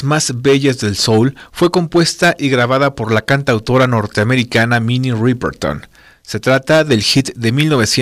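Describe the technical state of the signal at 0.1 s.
Hard clipping runs throughout: the speech is driven about 9 dB past what a stage can pass, so roughly 3% of samples are sliced flat, adding a harsh crackling fuzz.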